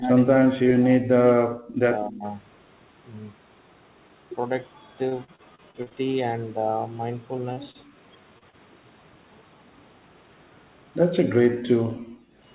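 For the first 2.24 seconds the talker's level keeps sinking and breaking up, in places by roughly 40 dB, so that about a second and a half of the opening is muffled or missing in pieces. This is speech suppressed in double talk. The likely cause is that both ends spoke at once, and the echo canceller could not tell the near talker from the loudspeaker's echo, so it pulled the microphone down along with the echo.

Inside that opening, from 0.04 to 0.08 s, a faint second copy of the voice slips through, about 15 dB under the speech and trailing it by around 250 ms. That is an echo leak. The likely source is a far end on a loudspeaker whose canceller left a residue of what its microphone heard and sent it back.

From 5.09 to 5.94 s the voice turns choppy and mechanical. Eight holes are patched over, roughly a quarter of the stretch, with the longest near 37 ms. This is repeated packet loss, giving the robotic sound. 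Each missing piece is filled by stretching the last sound, and the next gap arrives before the voice can settle, leaving a stuttering texture.

At 7.53, 7.71, 8.38 and 8.50 s there are brief smears or wobbles, each covering about 30 ms. These are short concealed packet loss. A small piece of audio arrived too late, and the receiver bridged it by continuing the previous sound before blending back in. A quick consonant can blur or drop out at these points.

Between 11.49 and 12.36 s the room sound behind the voice ducks, by up to 18 dB, for a total of around 0.4 s. This is the background gated by the echo canceller: it clamped the microphone while the loudspeaker was active, then released it.

Overlapping that, from 11.62 to 12.23 s, the delayed echo returns, about 20 dB down and again roughly 250 ms behind the voice. This is a second echo leak, likely from the same uncancelled loudspeaker path. 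Throughout the clip the audio carries the narrow, telephone-like band of the G.711 call path, with nothing above 4 kHz.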